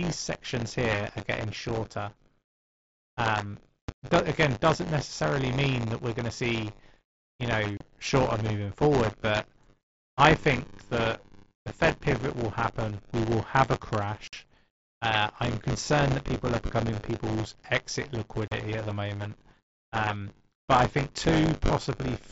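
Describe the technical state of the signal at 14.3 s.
Between 14.28 and 14.33 s, unconcealed Bluetooth headset packet loss drops about 52 ms of speech, a gap that fits seven lost mSBC frames. Silence or an idle pattern fills the hole, so the speech cuts out abruptly, with hard edges at both ends that can click.

Across this moment, as throughout the clip, buffer tearing is present. The writer and reader of the audio ring buffer have slipped, so roughly a tenth of each period replays audio from about 20 ms earlier. This produces a robotic 100 Hz buzz riding on the speech.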